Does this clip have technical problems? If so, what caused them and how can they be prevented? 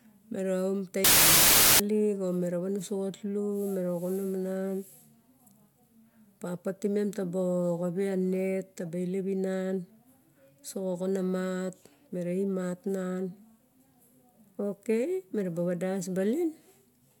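Yes. From 1.04 to 1.80 s the speech collapses into loud noise with the voice buried beneath it, running slow and low at about 0.75 times normal speed. This is a wrong sample width: 32-bit integer data read as packed 24-bit, so many values mix bytes from neighbouring samples. Unlike byte-order errors, the speed and pitch shift too. Prevent it by declaring and checking sample format at every interface.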